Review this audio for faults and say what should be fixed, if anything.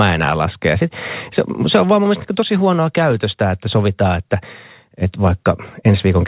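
Clock drift between sender and receiver runs through the whole clip. The sending clock runs roughly 4% fast, so the jitter buffer keeps overfilling. Unlike packet loss, it causes no gaps or dropouts, only small timing hiccups at uneven intervals.

Repeated timing corrections run from 0.03 to 6.26 s. The receiver trims short pieces to keep pace, so the speech plays at 104% with uneven small hiccups, all in one direction rather than random.

The narrowband sound, with nothing above 4 kHz, fits a call codec such as G.711 and is expected.

To prevent this, lock both ends to a common clock, or resample adaptively at the receiver so drift is absorbed smoothly instead of by cutting pieces.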